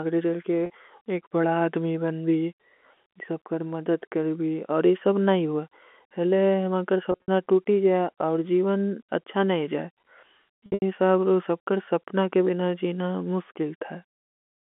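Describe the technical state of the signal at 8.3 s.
At 8.3 s the signal is intact, with no fault present, just the narrow telephone band of a G.711 line running as normal.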